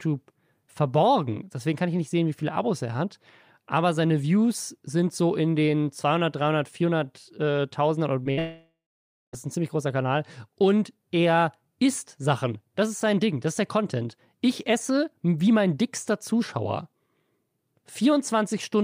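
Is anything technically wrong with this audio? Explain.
Yes. The speech is broken by three network faults in under a second and a half.

From 8.23 to 8.27 s there is a short concealed packet loss. About 20 ms of audio never reached the decoder in time. The receiver patched the hole by extending the last sound, then blended back into the real signal. You hear it as a brief smear or wobble.

From 8.31 to 8.39 s comes a burst of packet loss. Several consecutive packets failed to arrive, costing about 60 ms. The decoder kept repeating the last sound and lowered its level as the gap ran on. The result is a short held buzz or fading hiss. Speech then resumes a little further on, with the missing part simply gone.

From 8.39 to 9.35 s the sound drops out for nearly a second. This is likely a long network dropout, with roughly 940 ms of audio never played. Concealment first carries the last sound forward as a fading buzz or hiss. 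Once that runs out, about half a second of silence remains. Speech then returns further on, without the lost stretch.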